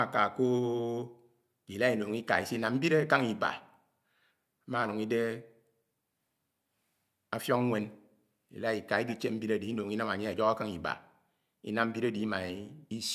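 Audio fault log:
No fault in this speech clip.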